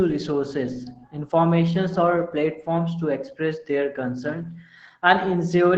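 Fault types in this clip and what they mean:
Opus voice compression: the speech sounds band-limited near 8 kHz and coarsely coded, so it's muffled and hoarse, with a faint robotic edge, consistent with a low-rate SILK setting around 12 kbps.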